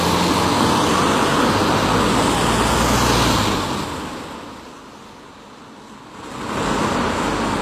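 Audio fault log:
throughout: HE-AAC compression. Treble sounds gritty and metallic, nothing above 14.9 kHz; likely low-bitrate band replication rebuilding highs from copied lower bands, which fits about 24 kbps.
6.06–6.66 s: zipper noise. A ticking zip rides the sound as level changes roughly 20 dB in 3 dB steps, about ten clicks per second, unsmoothed.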